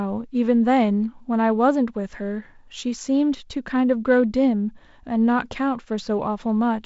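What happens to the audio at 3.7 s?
Nothing goes wrong at 3.7 s: the speech there is intact, carried over G.722 wideband telephone coding with its content ending around 7.7 kHz.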